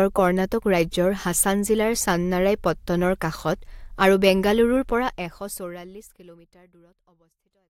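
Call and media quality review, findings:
Nothing stood out on listening to this speech, apart from an even, editor-style fade-out that begins around 5 s and reaches silence at 7.7 s.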